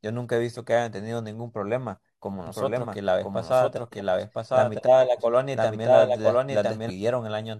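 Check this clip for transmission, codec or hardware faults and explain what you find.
One fault is present. From 2.47 to 6.90 s a doubled audio track runs: a second full-band copy of the speech trails about a second behind at roughly equal level, likely from a slower parallel capture path. It starts and stops abruptly, with no decay, and the spectrogram shows the same harmonic pattern repeated about one second later.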